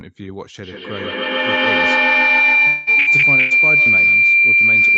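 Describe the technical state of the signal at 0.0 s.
At 0.0 s the speech is intact, with nothing beyond the ordinary band limit of a call path that carries no content above about 8 kHz.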